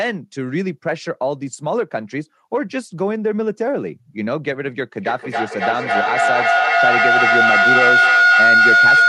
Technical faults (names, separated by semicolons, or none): feedback howl